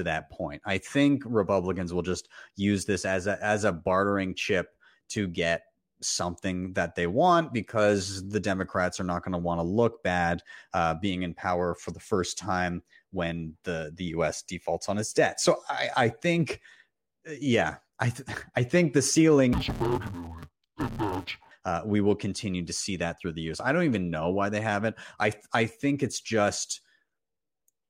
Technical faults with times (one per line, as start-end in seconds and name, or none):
19.53-21.51 interleaved audio read as planar